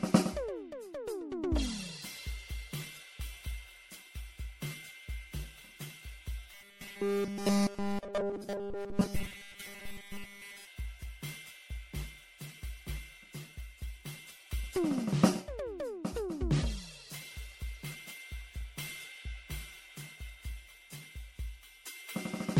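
From start to finish the music sounds swirly, hollow and smeared, with blurred attacks and nothing above about 16.7 kHz. This is likely generation loss: repeated MP3 encoding, around seven passes at a rate that fits 64 kbit/s, each adding fresh quantisation noise and spectral holes.

From 6.54 to 10.67 s the sound becomes a rigid metallic buzz at 200 Hz that still loosely follows the music. This is robotic sound from repeated short buffers, likely from a 5 ms chunk being repeated over and over while nearly all of the real audio is skipped.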